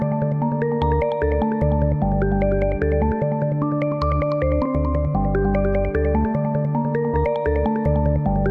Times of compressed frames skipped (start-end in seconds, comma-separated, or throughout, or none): 4.65, 7.13-7.15